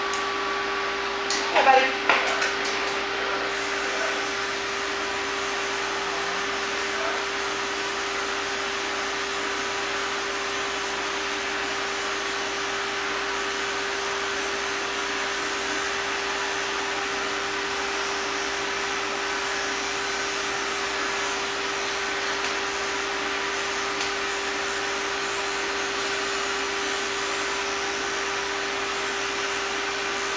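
No technical faults are audible.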